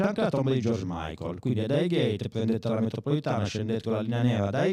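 Throughout the clip, every syllable of the speech is trailed by a second copy at equal level, 40 ms behind, giving a doubled, slapback quality. This is channel delay (doubling): one channel arrives a buffer late, and summing both to mono exposes the lag.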